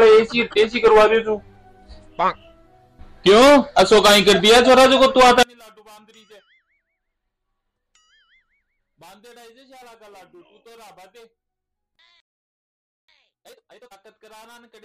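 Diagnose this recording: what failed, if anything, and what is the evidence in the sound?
From 5.43 s to the end, the sound drops by about 35 dB to a faint residue. This is likely one channel inverted in the wiring, cancelling in mono.

At 12.20 s the audio stops dead for 0.88 s, then resumes. This is a playback stall, likely the buffer running dry or the player's thread blocking.

From 13.08 to 13.96 s the audio rushes at twice normal speed with unchanged pitch. This is time-compressed catch-up, the player splicing out pieces to clear its backlog.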